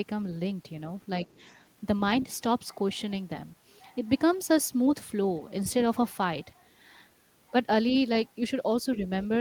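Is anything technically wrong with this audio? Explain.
Yes. From 1.27 to 1.49 s there is a brief stretch of the other side's voice leaking through, very faint, sitting far below the main speech. The likely cause is residual echo: the talker's device plays the far end on a loudspeaker, the microphone picks it up again, and the echo canceller fails to remove all of it. What remains is a short, low-level scrap of a second voice under the main talker, lasting about a fifth of a second.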